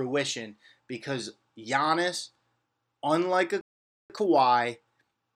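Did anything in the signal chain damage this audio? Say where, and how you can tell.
Yes. A playback stall, likely a starved or blocked player buffer, cuts the speech off after "unlike a" at 3.61 s, leaving 0.49 s of silence.

Time-compressed catch-up follows: the player splices out small cross-faded slices to clear its backlog, so from 4.10 s onward speech runs 1.15 times fast, pitch unchanged.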